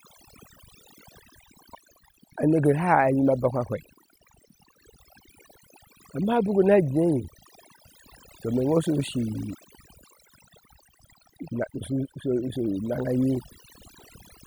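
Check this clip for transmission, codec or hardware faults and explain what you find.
One processing fault runs through the whole speech clip: overdone noise removal. Throughout, a noise reducer set too aggressively shuts off individual frequency bands whenever they sit near its noise estimate, taking quiet parts of the voice with them. The background drops and breaks up into twinkling specks.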